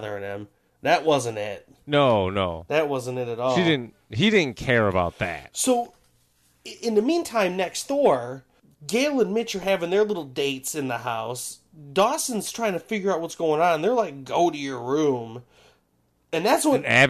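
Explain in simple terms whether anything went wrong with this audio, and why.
Nothing stood out on listening to this speech recording; no problem could be heard anywhere in it.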